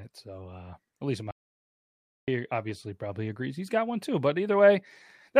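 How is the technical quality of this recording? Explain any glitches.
The speech cuts out abruptly at 1.31 s and returns at 2.28 s, leaving about 0.97 s of dead digital silence with no room tone. It's an audio dropout to silence, likely from the input being lost while the recorder kept writing silence, so that stretch is gone.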